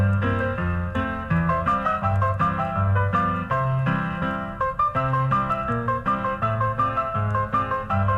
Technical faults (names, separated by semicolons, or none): none